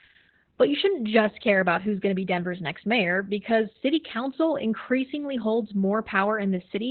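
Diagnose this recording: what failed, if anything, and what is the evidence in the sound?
Codec stage: heavy Opus voice compression throughout, with nothing above 4.3 kHz, muffled and hoarse speech, and a robotic edge, consistent with narrowband SILK near 8 kbps.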